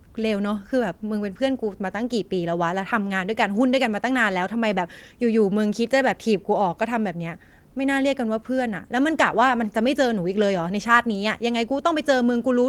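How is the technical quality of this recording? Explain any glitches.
Listening through this recording, nothing stood out as a glitch or technical problem worth pointing to.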